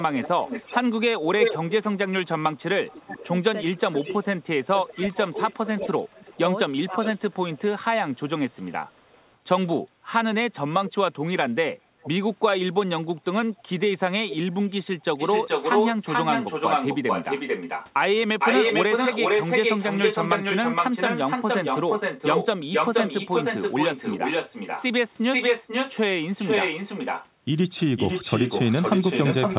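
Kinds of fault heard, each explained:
Echo leak: from 0.0 to 9.4 s, 12.01 to 12.10 s and 14.3 s onward, a copy trails 0.37 to 0.47 s behind, likely loudspeaker pickup an echo canceller missed.
Speech suppressed in double talk: from 2.4 to 7.6 s the speech dips up to about 25 dB, and again at 11.5 s, likely an echo canceller ducking overlapping talk.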